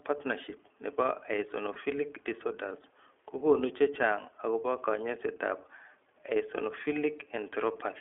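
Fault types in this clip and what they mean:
iLBC codec: Narrowband VoIP coding confines the speech to about 300 Hz to 3.4 kHz. It stays clear but sounds plainly rough and synthetic.
Lost iLBC frames: Single frames drop out near 1.74 s and 6.56 s. Each gap becomes a brief buzzy held vowel, then speech recovers at once.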